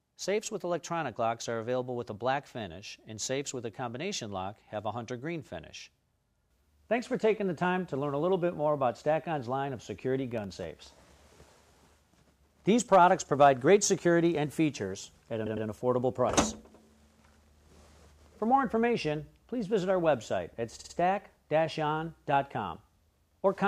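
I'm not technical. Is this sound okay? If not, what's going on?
No, there are two kinds of problem.

From 10.31 to 12.49 s you'll hear a fast, regular ticking, one tick every 0.064 s, about forty in all. These are periodic USB or driver dropouts: the computer's audio connection briefly stalled, and each time roughly half a millisecond of sound was replaced by silence. Unlike a stutter, nothing repeats and no time is added. It's just tiny, evenly spaced gaps, heard as clicks over the sound.

At 15.45 to 15.66 s and again at 20.78 to 20.94 s, the sound hiccups and replays itself. These are repeated frames: a chunk of the compressed file was stored or sent more than once, so the player plays it again. At 15.45 s a 104.5 ms piece plays two extra times, adding 209 ms. At 20.78 s a 52.2 ms piece plays three extra times, adding about 157 ms. Unlike the ticking, you hear the same bit of sound again, often with a small blip where it restarts, and the clip runs longer.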